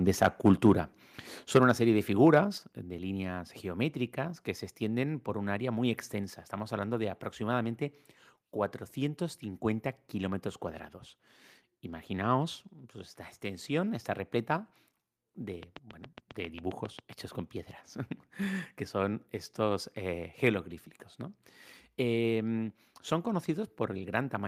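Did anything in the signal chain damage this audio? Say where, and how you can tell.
Yes. The damage sits at three stages: the analogue input and converter, the call processing, and the wiring or interface.

Microphone overload at 0.09–0.72 s and again at 1.55–1.58 s, just before "una serie de". The loudest speech peaks go flat-topped and take on a harsh, crackly edge, about 8 dB and then about 6 dB past full scale. The likely cause is a mic input gain set too hot, so the converter ran out of range and sheared off the waveform tops. A small fraction of the first stretch clips, but roughly a tenth of the brief second burst does.

Microphone volume stepped down at 1.57 s and again at 2.58 s. Both voice and background fall abruptly in level, by about 4 dB and then about 6 dB. The first drop lands right on the clipped peak before "una serie de". That timing points to call processing, likely automatic gain control that detected the overload and lowered the device's input volume in discrete steps rather than with a smooth fade.

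Train of clicks from 15.63 to 17.14 s, ending just before "con piedras". Around ten near-identical pulses tick over the speech at a steady 7.4 per second, standing about 10 dB above the signal, and they are audible in the gaps too. A regular, repeated pulse like this, independent of the speech, is likely electrical interference reaching the analogue wiring or a faulty connection or power supply.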